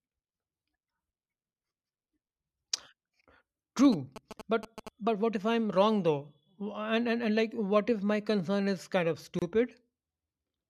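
From 3.85 to 4.89 s a galloping dit-dit-dit of short buzzes cuts across the speech, sitting roughly 10 dB below it. The buzz has a 217 Hz rate, the signature of GSM signalling bursts. A 2G phone close to the recording chain is exchanging short radio bursts with its network, and the audio circuitry rectifies that RF into an audible pulse train, heard only in clumps because the phone is signalling rather than carrying a call.

At 9.39 s the speech drops out for about 28 ms and resumes at 9.42 s exactly where it left off. The codec smears the edges, so the truly silent part is shorter than that. This is a gap at a join of encoded pieces. The audio was encoded in separate sections and spliced without trimming, so the start-up delay and final-frame padding that each encoder pass adds were left in place as a short hole in otherwise continuous sound.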